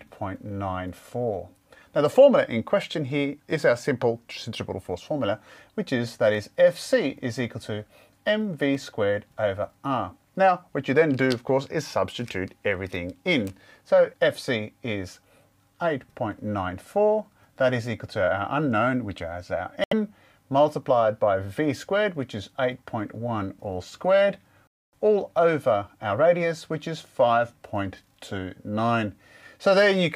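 At 6.35 s and 8.75 s there is a single sharp click each time, likely from dropped samples: a tiny fraction of a millisecond missing from the stream, so the waveform jumps abruptly to a later value without any audible gap.

At 19.84 s the audio cuts to silence for 76 ms, and at 24.67 s for 257 ms, before resuming. Both are likely Bluetooth stalls, where interference delayed packets until the headphone buffer ran empty and playback paused.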